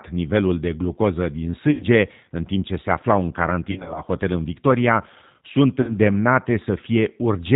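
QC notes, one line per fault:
Throughout: G.729 codec. The band stops at 4 kHz and the speech sounds rough and slightly synthetic, which fits an 8 kbit/s codec. It rebuilds the voice from a vocal tract filter, a pitch predictor and a few pulses per frame.
1.71–1.84 s, 3.71–4.02 s, 5.81–5.96 s: VoIP packet loss concealed by the speech codec. About 90 ms is lost after "nivelul de glucoză din", before "în timp ce se". About 130 ms is lost in scattered bursts after "ce se aflau în". About 70 ms is lost near 5.8 s. Each gap becomes a fading buzzy tone or coloured noise, and the voice stays weak briefly afterward.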